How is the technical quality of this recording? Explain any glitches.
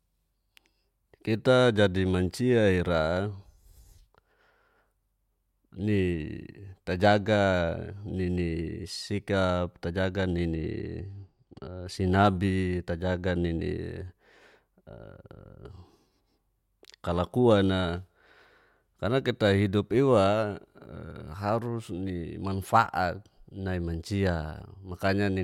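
The recording has one glitch, a brief stretch of comb filtering. Channel delay (comb filtering) appears from 10.56 to 11.86 s. One channel runs late by a tiny amount, only a few hundredths of a millisecond, which fits a lag of a couple of samples, and the two are then summed to mono. Content shared by both channels cancels at regularly spaced frequencies, the first near 10 kHz. The speech there loses some top-end air and sounds slightly dulled.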